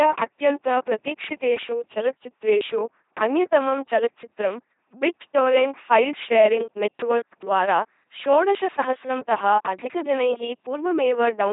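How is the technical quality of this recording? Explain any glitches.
Quality's pretty rough: the whole speech clip runs through an LPC-10 vocoder, and it's heavy damage from start to finish. LPC-10 throws away the actual waveform and rebuilds each moment from a small all-pole filter fed by either a buzzy pulse train or noise, never a mix. So you get that flat, mechanical robot voice, with stray buzz or hiss where voicing gets misjudged. Nothing's there above about 3.8 kHz, and the sound points to roughly 2.4 kbit/s.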